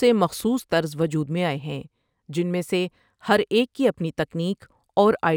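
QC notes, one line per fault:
Throughout, imaging from linear upsampling: the sample rate was raised by straight-line interpolation, a weak filter, which fits a 24 kHz source brought up to 44.1 kHz. The speech loses top-end clarity, and a mirrored spectrum remains at 12 kHz to 24 kHz, roughly 35 dB down, adding a faint metallic shimmer to sibilants.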